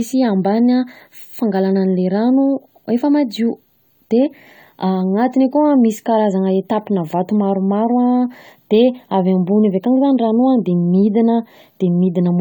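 Speech carrying generation loss throughout, most likely from being encoded with AAC-LC at around 64 kbit/s several times over, about four passes. Each re-encode quantises afresh on a shifted frame grid, so the speech sounds swirly, smeared and hollow, with consonant attacks blurred.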